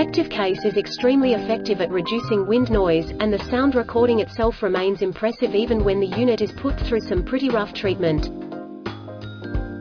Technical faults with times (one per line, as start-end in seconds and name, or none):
none